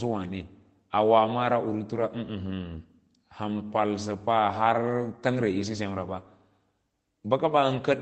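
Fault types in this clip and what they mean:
Lost packet rebuilt from error correction: at 1.95–2.01 s, rougher low-bitrate copies fill the loss, so the waveform shows no gap and the spectrogram shows a brief noisier, smeared patch.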